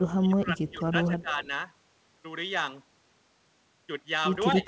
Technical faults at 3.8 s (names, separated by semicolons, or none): none